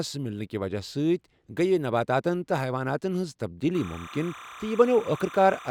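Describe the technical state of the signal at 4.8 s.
Timecode bleed runs from 3.75 s to the end. Linear timecode at 29.97 frames per second leaks in, a warbling chirp near 1 and 2 kHz, roughly 20 dB below the speech.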